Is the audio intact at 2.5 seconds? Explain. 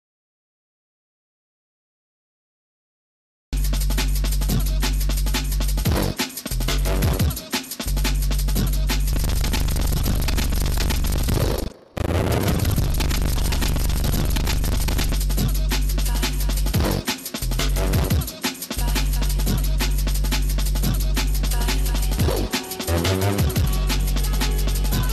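Yes, the audio at 2.5 seconds is intact, with no dropout, click, distortion or other fault at that point.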